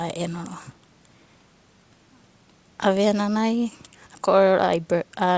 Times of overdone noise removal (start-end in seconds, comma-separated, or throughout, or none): none